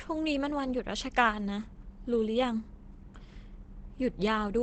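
Throughout the speech, the audio has likely gone through Opus compression in its speech-oriented mode at a low bitrate, one that fits about 16 kbps, with bandwidth held to wideband. The damage is plainly audible: the speech sounds muffled and hoarse, its upper range cut away.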